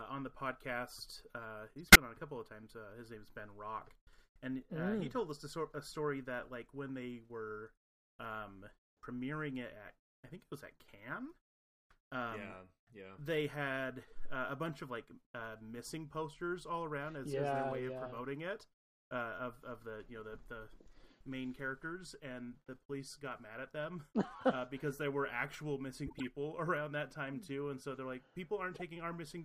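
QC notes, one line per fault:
1.84 to 1.96 s, corrupt frame decoded: flipped bits in a run of several compressed frames were decoded anyway, so misread gains push energy into wrong frequencies; a loud glitch, peaking near -10 dBFS.
26.07 to 26.23 s, corrupt frame decoded: a similar run of damaged frames gives a quieter glitch, around -30 dBFS.
28.74 to 28.81 s, corrupt frame decoded: a few bad frames leave a brief faint glitch, around -35 dBFS.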